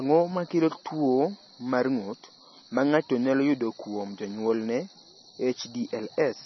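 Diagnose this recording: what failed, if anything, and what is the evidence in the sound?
Throughout the speech, nothing sounds above 5.9 kHz, and s sounds turn watery and swirly with heavy metallic chirping. That points to the codec stage, likely MP3 compression starved of bits, which fits around 24 kbps. A plain low-pass filter would dull the treble without the swirl.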